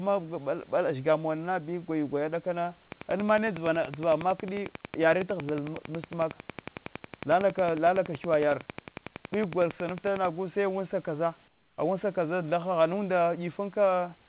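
From 2.92 s to 10.26 s a train of clicks runs over the speech, evenly spaced at about 10.9 per second, some seventy in all, peaking around 15 dB above the signal. The similar, regular pulses point to interference from nearby equipment or a faulty connection or power supply as the likely source.

At 11.48 s the room background is replaced by comfort noise for 300 ms, until 11.78 s: a smooth, featureless hiss about 8 dB quieter than the real room noise, heard against the 4 kHz band limit of the G.711 call path. This is likely discontinuous transmission halting audio during the pause while the receiver synthesises filler noise.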